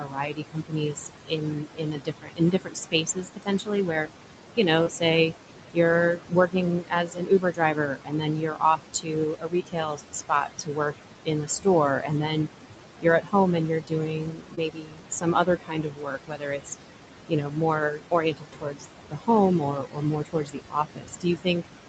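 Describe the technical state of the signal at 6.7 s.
Speech cut by the noise suppressor affects the stretch from 6.16 to 11.67 s, so 6.7 s falls inside it. The suppressor mistakes parts of the speech for background noise and turns them down, by about 19 dB at the deepest, over roughly three seconds in total, leaving soft consonants and word endings swallowed and faint.

Noise suppressor artifacts run through the whole clip, including this moment. The suppressor lowers bands it judges to be steady noise, frame by frame, by about 18 dB. The residue pumps between phrases and rises under the speech.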